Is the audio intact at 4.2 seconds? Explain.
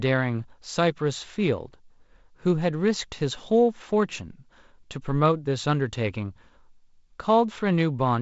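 Yes, the audio is intact at 4.2 seconds, with no fault there beyond the light hiss and softened top end of its G.722 wideband telephone coding.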